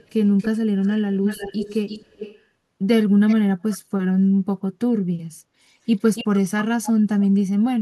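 An echo canceller at the far end likely failed to remove its loudspeaker pickup. The result is echo leak, a delayed copy of the speech trailing by 281 or 337 ms and roughly 10 to 25 dB below it. It occurs at 0.03–0.48, 0.82–0.95, 1.15–2.42, 3.28–3.36, 3.71–3.78 and 6.15–6.4 s.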